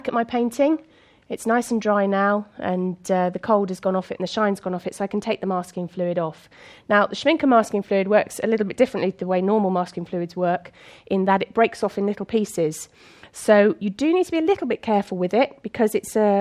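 Nothing in the signal points to a technical fault at any point in the recording.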